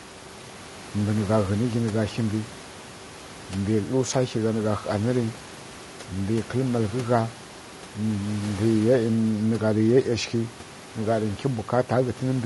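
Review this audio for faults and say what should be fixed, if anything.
Throughout the speech the voice sounds rough and grainy, with noise filling the gaps between pitch harmonics and a dulled, synthetic-sounding top band. This is likely low-delay AAC compression (AAC-ELD). Its short frames resolve harmonics poorly, and damage this plain fits a bitrate around 32 kbps. On a spectrogram the harmonic stripes look smeared and speckled, and the upper band is patchy. The room noise sits about 21 dB below the speech. Sending the audio at a higher bitrate, or with a longer-frame codec where latency allows, would prevent this.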